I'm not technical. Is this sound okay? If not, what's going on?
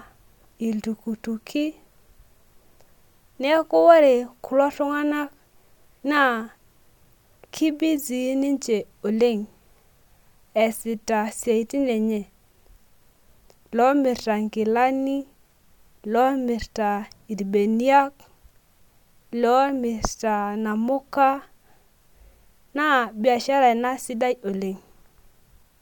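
Yes, nothing in this recording sounds wrong.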